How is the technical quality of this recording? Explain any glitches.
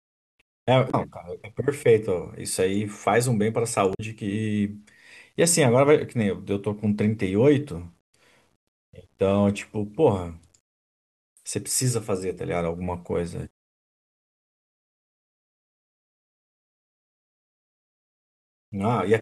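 The recording has two kinds of fault: a grainy distortion running through the whole clip, and two brief glitches near the start.

Low bit depth without dither is audible from beginning to end. The grit sits roughly 50 dB below the speech and rises and falls with it, so it is most exposed in quiet passages and decaying syllables, where the sound turns rough and faint tails break up or vanish into silence. The likely cause is the speech being rounded to about 10 bits with no dither. Because that rounding error tracks the waveform instead of forming a steady hiss, it comes across as distortion rather than noise.

Damaged data in a compressed stream causes the two glitches, at 0.88 to 0.95 s and 3.91 to 4.00 s. Each is a short chirp or blip lasting under a tenth of a second. Corrupted bytes in the encoded stream made the decoder misread those frames and lose its place. It then produced garbled output until it locked onto the next valid frame header.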